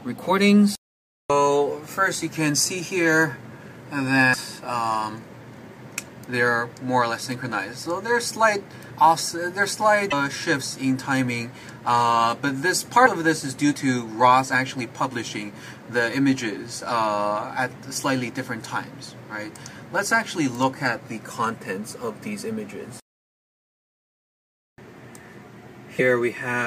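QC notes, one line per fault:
4.33–4.35 s, 10.10–10.13 s, 13.05–13.08 s, 25.98–26.00 s: broken MP3 bit reservoir. Audio skips ahead with a one-frame chirp, noise burst or gap, likely from dropped frames leaving the next frame to read another frame's bytes as its borrowed data.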